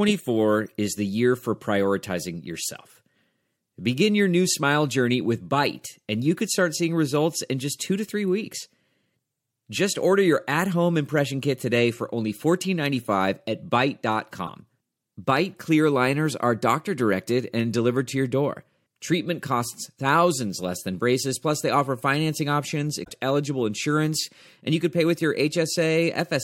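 At 14.43 to 14.49 s, and again at 23.00 to 23.10 s between "they offer financing options" and "eligible insurance and you", the speech breaks up briefly from damaged data in the compressed stream. The decoder misreads corrupted frames and loses sync before locking onto the next valid header.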